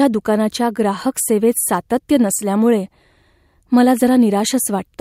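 Speech, with nothing technically wrong to report.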